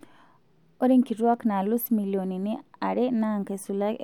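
A speech clip with a single sharp click at 1.34 s, likely from dropped samples: a handful of samples, a fraction of a millisecond, missing, so the waveform jumps abruptly to a later value. A spectrogram shows a thin vertical line spanning all frequencies at that instant.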